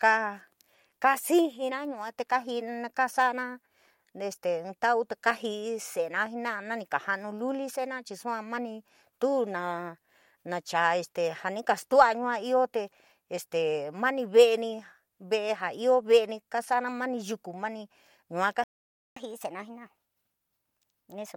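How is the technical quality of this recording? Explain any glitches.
The recording has two linked playback faults near the end, a stall followed by a sped-up stretch.

From 18.64 to 19.16 s the speech cuts out for about 0.53 s: a playback stall. The silence falls mid-flow. The likely cause is the player running short of data or its thread being blocked, so nothing reached the output. Unlike a dropout from packet loss, which tends to be brief, this is one clean gap of about half a second.

From 19.16 s until the clip ends, the speech plays 1.15 times faster and about two semitones higher: catch-up at higher speed. The player is resampling its built-up backlog to win back the time lost in the stall, so tempo and pitch rise together and stay raised through the final two seconds. That coupling sets it apart from time-stretching, which would speed up delivery while keeping the pitch unchanged.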